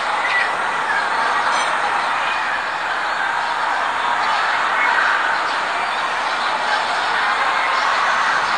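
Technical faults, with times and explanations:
No technical faults can be heard anywhere in this clip. There is nothing to mark at any time.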